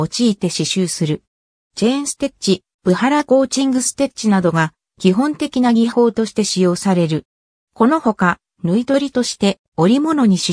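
Nothing stood out as a technical fault when listening to this recording.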